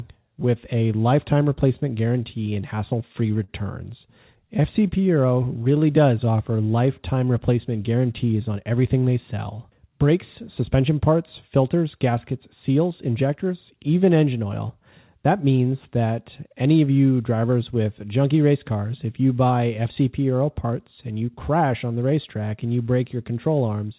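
Right after "with a lifetime replacement", from 2.08 to 3.5 s, there's a patch of scattered short gaps: about five small holes where packets went missing or arrived late. The receiver papered over each one by stretching out the last bit of sound, around 70 ms of fill in total, with none of the gaps longer than about 40 ms. So you get little ticks and smears in between stretches of clear speech, and the section ends up running about 18 ms longer.

Next, from 3.9 to 6.37 s, leading into "lifetime replacement", comes a jitter buffer slow-down. The buffer wanted more in reserve, so the receiver kept repeating tiny slices of the signal, adding 129 ms overall. Speech drags to about 95% speed with the pitch unchanged, which makes the sounds feel drawn out rather than deeper.

Then the opposite happens between 8.33 and 9.54 s, after "lifetime replacement" and just before "brakes suspension parts filters": a jitter buffer speed-up. 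The buffer had too much queued, so the receiver trimmed out short pieces of the waveform, roughly 150 ms in all. That bumps the pace to about 110% at the same pitch, and that little run of speech comes across as noticeably hurried.

Underneath all this, nothing comes through above 4 kHz, which fits a narrowband G.711 mu-law call codec.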